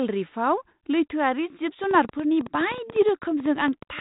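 Irregular ticking runs over the speech from 1.84 s to the end at about 4.00 s: a train of clicks, about 10 per second, around twenty in all, peaking roughly 5 dB above the speech. It is likely interference from nearby equipment or a faulty connection or power supply. The speech itself is band-limited below 3.8 kHz, as expected from its 32 kbit/s G.726 ADPCM telephone coding.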